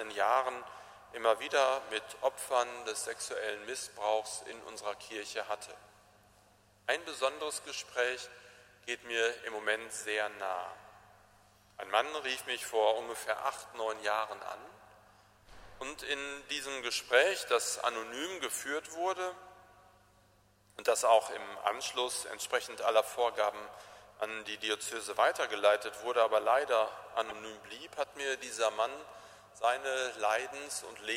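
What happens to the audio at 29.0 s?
At 29.0 s the clock slip clicks are still running, as they do from 0.13 s to 31.12 s. They are faint, regular ticks roughly every 70 ms, merging into a soft rattle, and they come and go with the audio's level. The likely cause is two unsynchronised clocks differing by a few hundred ppm, so a single sample is dropped or repeated at each slip.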